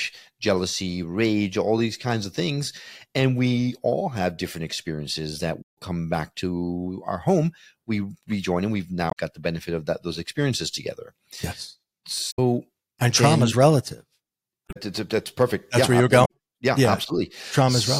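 Five short glitches break up the audio, and they all sound like damaged data in a compressed stream: brief chirpy, garbled bursts at 5.61 to 5.78 s, 9.08 to 9.18 s, 12.30 to 12.39 s, 14.65 to 14.77 s and 16.24 to 16.31 s, each under a fifth of a second. What's happening is that bits of the encoded stream got corrupted, so the decoder chokes on those frames, loses its place and has to hunt for the next clean header before it can carry on.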